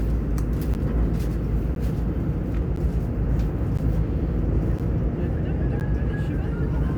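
An everyday sound recording with a gap between chunks. Hard-edged 12 ms silences occur at 0.74, 1.75, 2.76, 3.77, 4.79 and 5.80 s. The audio plays in 1.0 s chunks with silence inserted at each join.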